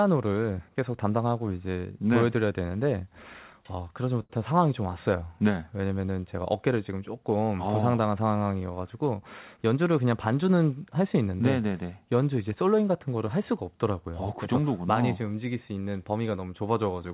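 At 4.22 s the speech hangs for a moment. One sound is held too long, with a faint buzzy flatness, until 4.39 s, and then the speech carries on from where it left off with nothing skipped. This is a short stall from a late packet. A packet was not there when it was due, so the jitter buffer ran dry. The receiver stretched the last sound by about 76 ms until the packet turned up.

From 9.57 s to 10.43 s the speech sounds slightly hurried. It runs at about 107% of its normal pace while the pitch stays the same. This is a jitter buffer speed-up. The buffer was holding more audio than it aims for, so the receiver repeatedly cut out short pitch-period-sized pieces, about 70 ms in all, to bring the delay back down. Throughout the clip the audio is band-limited with nothing above 4 kHz, as expected on this call path.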